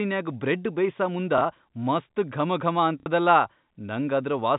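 At 1.38 s the speech hiccups briefly, then again from 3.0 to 3.06 s: packet loss with the last packet repeated, which fits 30 ms packets. The longer gap buzzes robotically, over a narrow G.711 telephone band.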